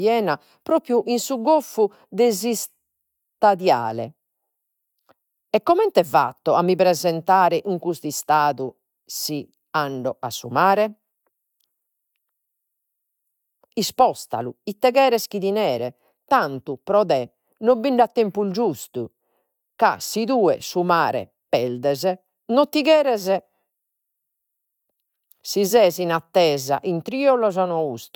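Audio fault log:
Nothing in this speech recording is heard as a fault. The log has no entries to give for it.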